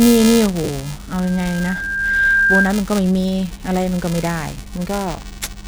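In this speech clip, the program filling the playback ring buffer and the hardware reading it have slipped out of step, so they cross inside every period. A small slice of each buffer carries audio roughly 10 ms stale, producing buffer tearing: a continuous robotic 375 Hz buzz, which fits a 128-sample buffer. At 0.64 to 0.69 s, lost LE Audio frames leave a 50 ms gap that the LC3 decoder fills by repeating the last spectrum with random signs, turning the sound into a brief noisy smear. From 1.22 to 2.78 s, a microphone picks up its own loudspeaker and the loop gain exceeds one at 1.6 kHz. The resulting loudspeaker feedback squeal swells over about a second until it sits roughly 5 dB above the speech.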